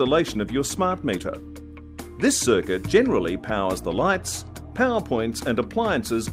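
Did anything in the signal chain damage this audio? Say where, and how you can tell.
No, nothing along the chain left a mark I can hear, so there's no stage to point to here.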